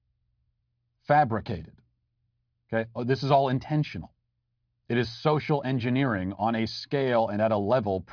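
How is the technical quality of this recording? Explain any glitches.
Technical quality holds up, with no glitches anywhere in the speech recording.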